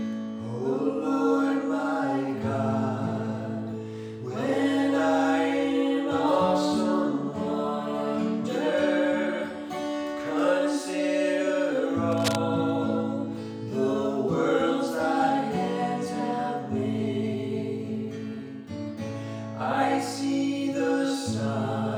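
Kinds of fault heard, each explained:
Cable scratch noise: dense, uneven scratching from 12.1 to 12.4 s, about 5 dB under the sound, likely a worn cable or connector moving.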